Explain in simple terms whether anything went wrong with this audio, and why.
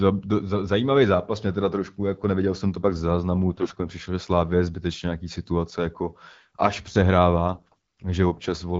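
Yes, something went wrong twice: from 3.48 to 3.74 s and from 7.54 to 8.06 s, the speech turns hoarse, scratchy and gargly. These are AMR bit errors. On a weak radio link, about one in ten of the less important bits in the phone codec's data arrived flipped. The decoder still trusted them, so it rebuilt the voice with wrong details. Unlike dropped packets, which leave gaps or silence, here the pitch and loudness roughly hold while the texture turns rough.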